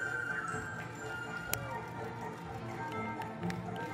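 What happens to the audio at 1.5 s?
At 1.54 s there is an uninitialised buffer: a single block of about 5 ms reaches the output before any audio has been written into it, so whatever stale values were sitting in that memory are played back as if they were samples. Because those values bear no relation to the surrounding signal, the result is a loud crack that cuts abruptly across the audio and stops just as suddenly.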